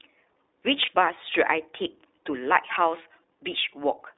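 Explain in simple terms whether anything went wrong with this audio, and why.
The call went through the iLBC codec, a narrowband phone codec, so everything below 300 Hz and above 3.7 kHz is gone, leaving the speech thin, slightly rough and synthetic.

Lost iLBC frames: around 0.86 to 0.89 s, a brief piece of the stream went missing, consistent with one dropped 20 ms frame. The decoder filled it with a short buzzy, held sound before the speech snapped back.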